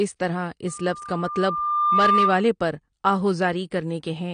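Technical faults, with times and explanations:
throughout: AAC compression, with nothing above 9.6 kHz and plainly audible codec damage. This likely comes from AAC-LC coding at a low rate, perhaps around 32 kbps. The sound is dulled and smeared, with a fizzy, warbling edge on sibilants. A spectrogram shows a hard ceiling and patchy gaps in the upper bands.
0.67–2.47 s: loudspeaker feedback squeal, starting just after "اس طرح". A steady 1.2 kHz tone swells over about a second and a half to roughly 5 dB above the speech, because the microphone is re-amplifying its own loudspeaker output at that frequency. A spectrogram shows a single bright horizontal line that thickens as it grows, and the waveform envelope rises steadily.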